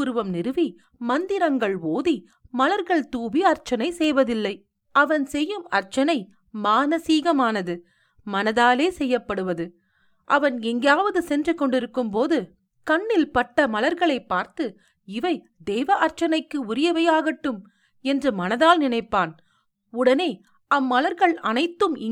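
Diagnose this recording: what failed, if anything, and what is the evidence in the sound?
A single sharp click at 4.04 s, a thin vertical line across the spectrum, marks dropped samples. The waveform leaps ahead past a handful of samples, well under a millisecond, too brief to remove any speech. The likely stage is the driver or buffer skipping samples in transfer.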